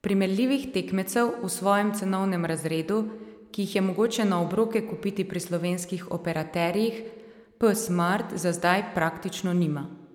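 Speech recording; no technical faults can be heard.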